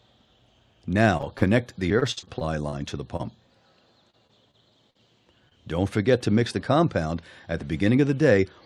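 From 1.17 to 1.43 s comes the first stretch of repeated packet loss, with its robotic sound. Four gaps fall in quarter of a second. The longest is 31 ms. The receiver patches each gap by continuing the last sound, and another gap follows soon after. About 30% of this span is concealment. It sounds choppy, robotic and broken up.

The same fault returns from 1.99 to 2.74 s. This time six gaps hit, and the longest runs 53 ms. Some 180 ms are patched, about a quarter of the span. The sound stutters and turns mechanical.

At 3.16 to 3.25 s a short concealed packet loss occurs. About 20 ms never arrived in time. The decoder fills it with 28 ms of continued sound, then blends back. The patch stretches things by roughly 10 ms. It is heard as a brief smear.

From 4.10 to 4.97 s the repeated packet loss is back. There are four gaps, the longest 44 ms. About 13% of the span is filled. The choppy, robotic quality is sparser here.

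At 5.49 to 5.53 s another short concealed packet loss fills a 20 ms hole with 19 ms of continued sound. It gives a quick wobble.

From 7.99 to 8.62 s a jitter buffer speed-up sets in. Too much audio has piled up in the buffer. To cut the delay, the receiver removes pitch-period-sized slices again and again, about 70 ms in all. Playback runs at 109% speed with no change in pitch. The ending sounds rushed.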